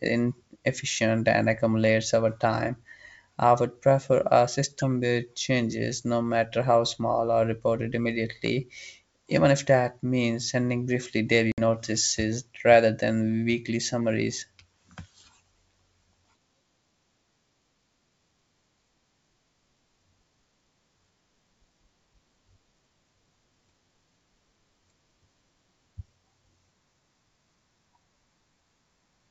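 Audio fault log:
11.52–11.61 s, packet loss on an ADPCM call: about 60 ms of the G.722 wideband stream, roughly three packets, drops out and leaves a hard-edged gap of silence. Because ADPCM sends only differences, the receiving decoder's adaptive predictor and step size lose track of the sender's state during the hole. Speech resumes with brief, slight distortion until the two sides fall back into step.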